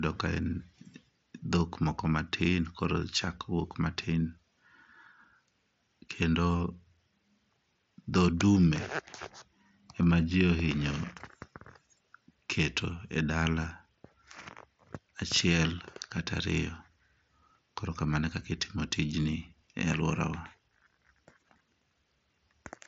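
No faults are present in this speech; the audio is band-limited at about 7.7 kHz, consistent with a wideband Bluetooth mSBC headset link.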